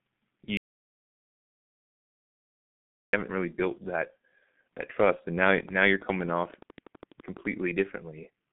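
G.723.1 codec damage runs through this whole speech clip. Nothing survives above 3.8 kHz, the band sits roughly between 150 Hz and 3.6 kHz, and the coarse 30 ms frame modelling leaves the sound muffled and hoarse with smeared consonants, which fits a heavily compressed stream around 6.3 kbit/s. An audio dropout to silence runs from 0.57 s to 3.13 s, a hole of about 2.56 s with no room tone at all. The recording returns just before "haven't really built that", and whatever was said during the gap is lost. The likely cause is the input cutting out while silence kept being written. A train of clicks follows from 5.60 s to 7.46 s, just after "that trust and now". About twenty similar pops arrive at a steady 11.9 per second, peaking at roughly 5 dB above the speech, which likely points to interference or a struggling interface injecting pulses.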